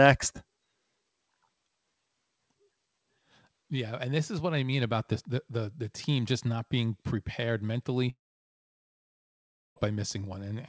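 At 8.10 s, right after "just not being prepared", the speech cuts out. A short buzz carries the last sound and fades. Silence then holds for about 1.6 s, until 9.78 s. This is a long network dropout, likely lost packets. That stretch never returns.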